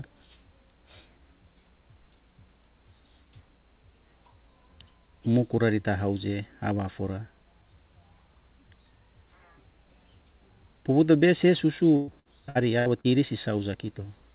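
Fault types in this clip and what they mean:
Repeated packet loss (robotic sound): Lost packets were filled by repeating earlier sound. After "pouto bese", 11.96 to 13.07 s turns choppy, with five gaps.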